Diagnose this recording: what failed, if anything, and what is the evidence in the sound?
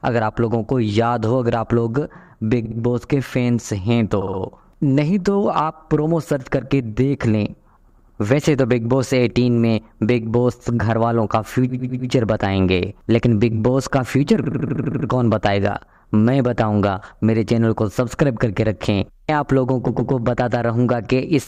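Repeated frames at 2.65–2.77 s, 4.21–4.40 s, 7.89–8.19 s, 11.69–12.09 s, 14.43–15.07 s and 19.87–20.11 s, a codec or storage fault. Each time a short block of 60, 60, 100, 100, 80 or 120 ms plays again two to eight times, heard as a stutter. The block lengths fit whole runs of about 20 ms compressed frames being written more than once, and each repeat makes the sound longer, by 120 to 640 ms per event.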